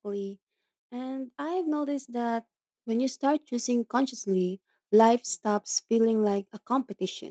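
From 0.9 to 2.52 s, automatic gain rising slowly lifts the level by about 7 dB. Background swells with the voice, so the talker isn't moving closer.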